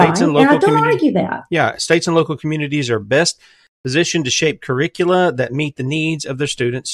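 Nothing is technically wrong with this speech recording, and no faults can be heard anywhere in it.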